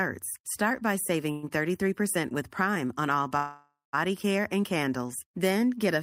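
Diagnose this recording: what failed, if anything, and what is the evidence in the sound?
The sound stalls into a fading buzz at 1.31 to 1.45 s, and again after "on all" from 3.37 to 3.95 s, dying to silence for its last 0.18 s before "care and candles" resumes intact. This call audio freeze is likely network delay draining the jitter buffer, adding 0.11 s and 0.56 s.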